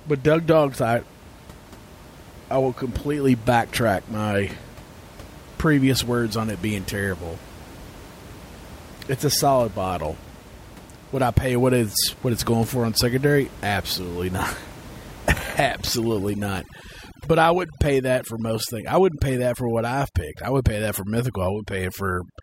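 From 15.42 s to 22.43 s the clip shows overdone noise removal. The noise reduction stage is working far too aggressively against a room noise floor sitting about 20 dB below the speech, pulling individual frequency bands down or out whenever they approach its noise estimate. Quieter speech components are stripped along with the noise, so the background in the pauses drops and breaks up into twinkling specks.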